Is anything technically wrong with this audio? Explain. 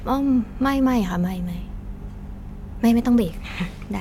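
No, there's nothing technically wrong with this speech recording that I can hear.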